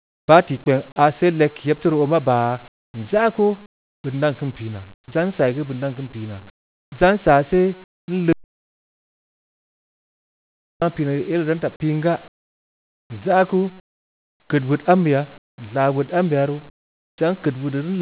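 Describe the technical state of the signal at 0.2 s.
At 0.2 s the signal sits inside a stretch from 0.00 to 0.28 s where the real background has been replaced by comfort noise. The sender likely stopped transmitting under discontinuous transmission, and the receiver filled the gap with synthetic noise roughly matched to the background's spectrum. The result is a steady, featureless hiss about 30 dB quieter than what follows, band-limited to 4 kHz like the narrowband call path carrying it.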